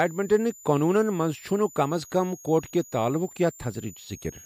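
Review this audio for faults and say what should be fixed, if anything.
A switching supply whistle runs throughout: a power supply switching at an audible rate produces a thin high tone that wanders between 6.5 and 7.3 kHz, centred near 7 kHz, sitting roughly 25 dB below the speech. Prevent it by powering the recording chain from a linear or well-filtered supply kept away from the microphone cabling.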